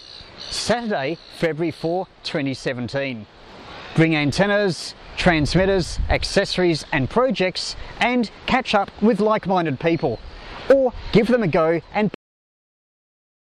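At 12.14 s the sound stops mid-event and drops straight into digital silence with no decay: a cut-off end, where the final buffers were never written or played.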